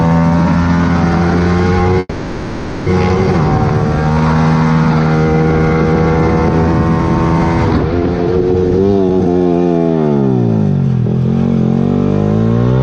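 At 1.99 s the sound stalls into a fading buzz or hiss continuation for about 0.87 s, with a brief silence of about 10 ms, then resumes at 2.89 s with nothing skipped. That's a call audio freeze, likely from delayed packets draining the jitter buffer, so a gap gets inserted.

From 8.82 to 10.23 s there's a jitter buffer speed-up. With too much audio buffered, the receiver trims pitch-period-sized slices over and over, dropping around 0.7 s in total. The sound runs about 155% speed at unchanged pitch, so it feels rushed.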